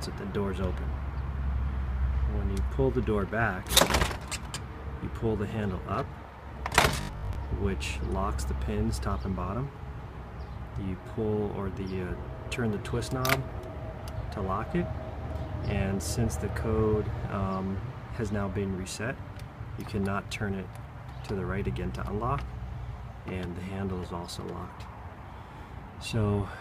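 From 7.01 to 7.41 s the audio takes on a robotic sound from repeated short buffers. A fixed 50 Hz buzz is imposed on the audio, which fits a 20 ms fragment being looped, likely because about half the incoming audio arrived too late and was replaced.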